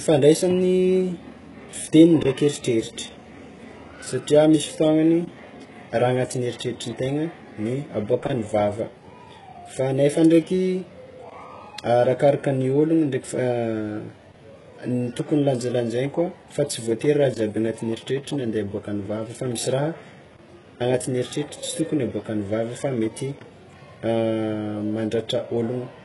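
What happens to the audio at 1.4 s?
At 1.4 s the speech carries heavy, continuous HE-AAC-style damage: gritty, lispy sibilants from treble likely rebuilt by band replication at a bitrate near 12 kbps; spectrograms show copied, smeared upper bands ending sharply at 11.4 kHz.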